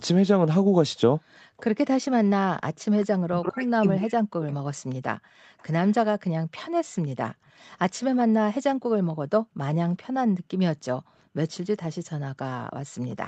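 From 0.24 to 4.84 s the talker's speech drops out in pieces, about 40 dB down and roughly 1.5 s in total. This is speech suppressed in double talk, likely because the echo canceller mistook both sides talking at once for its own echo. Unlike gating, the voice itself is cut.

Between 0.64 and 1.57 s the room background is gated by the echo canceller, falling about 40 dB for roughly 0.4 s in total. Only the ambience vanishes and then returns, so it is not the voice being cut.

From 1.57 to 8.05 s an echo leak can be heard: a faint copy of the voice about 0.4 s late and about 30 dB below it. This is likely sound from a loudspeaker that the echo canceller failed to remove. It is a repeat of the voice rather than a dropout.

From 5.19 s to the end the background is gated again, dipping by up to about 40 dB. At 13.1 to 13.16 s a brief echo scrap, about 35 dB down and 0.4 s late, leaks through in the same way.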